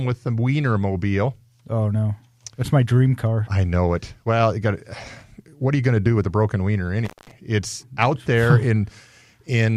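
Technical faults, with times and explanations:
7.05–7.31 s, intermittent contact: Right after "with a broken wiener", the speech drops out for about 0.2 s. A loose plug or cable briefly breaks the signal path. Crackle marks the moments it opens and recloses. Faint hiss remains during the gap.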